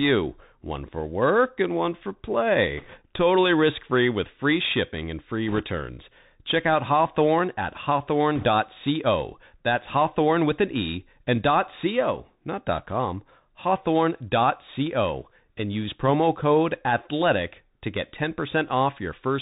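Speech carried over a narrowband Bluetooth link using the CVSD headset codec, which tracks the signal one bit at a time with an adaptive step, fits a 64 kbps stream and passes nothing above 4 kHz. The speech sounds muffled, sibilants turn scratchy, and a granular hiss sits underneath throughout. Bit errors on a Bluetooth voice link, at a rate of a few percent, flip bits during 2.78–3.00 s, 5.48–5.61 s and 8.36–8.45 s. Because each bit carries little weight, these bursts add a rushing crackle rather than sharp clicks.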